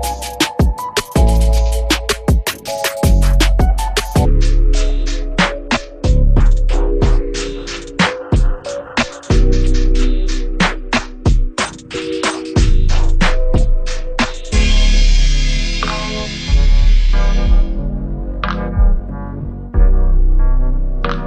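A likely clock mismatch in playback or editing has put a section at the wrong speed: from 4.25 s to the end of the clip, the audio runs at 0.575 times its recorded rate. Because speed and pitch move together, everything from that point is suddenly slowed and dropped by roughly ten semitones, so the sound turns deep, heavy and drawn out, with the change arriving abruptly at 4.25 s rather than easing in.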